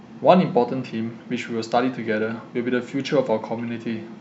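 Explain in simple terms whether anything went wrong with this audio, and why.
Nothing went wrong here: the speech comes through steadily, with no glitches, gaps or odd noises anywhere along the way.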